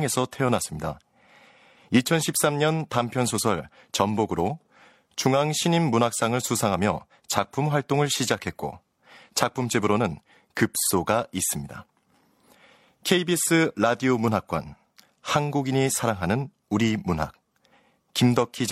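Nothing in the speech stood out as a technical problem on listening.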